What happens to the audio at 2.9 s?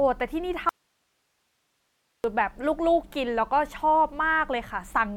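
Nothing goes wrong at 2.9 s; the speech runs through that moment intact, with no dropout, click or distortion.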